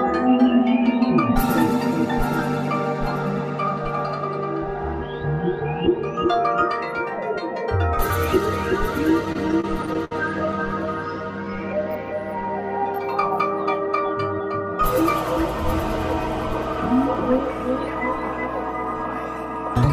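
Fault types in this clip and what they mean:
Repeated stalls (stutter): packets arrived late, so the jitter buffer emptied twelve times between 9.25 and 10.63 s, each gap filled by continuing the last sound, longest 64 ms.
Jitter buffer slow-down: to rebuild its reserve, the receiver repeated pitch periods from 11.25 to 11.74 s, adding 74 ms and running at 87% speed, same pitch.
Jitter buffer speed-up: with excess audio buffered, the receiver cut short pitch-period pieces from 13.86 to 14.61 s, removing roughly 50 ms, playing 6% faster at unchanged pitch.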